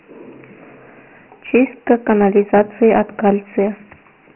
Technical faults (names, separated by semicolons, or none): Dialogic VOX ADPCM